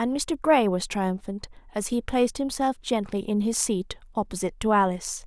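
No technical faults can be heard at any point in the recording.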